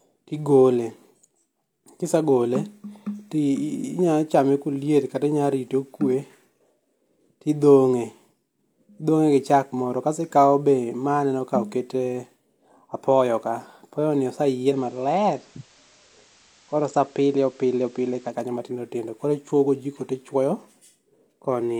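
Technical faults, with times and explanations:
14.68–18.37 s, digital radio blending to analogue: digital reception dropped, cross-fading over 106 ms to FM, with hiss some 30 dB down, until "matindo tindo koro ichwogojiko".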